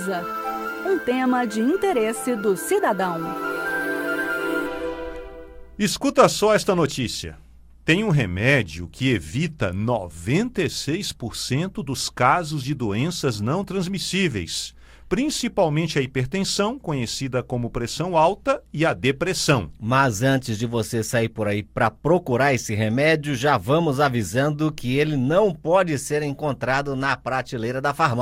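Nothing stood out as a technical fault on listening to this recording.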